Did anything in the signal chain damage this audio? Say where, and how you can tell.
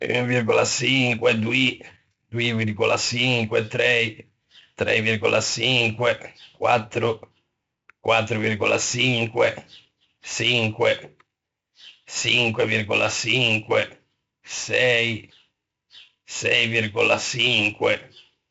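Yes, at the codec stage: 4-bit ADPCM compression runs through the whole speech clip. Gritty hiss rides every loud syllable and attacks distort as the step size lags. A spectrogram shows level-following broadband noise and nothing above 7.7 kHz, which fits a 64 kbps stream.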